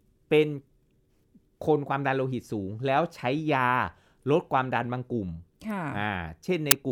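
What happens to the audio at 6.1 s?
At 6.1 s the speech carries on intact, with no dropout, click, distortion or other audible fault.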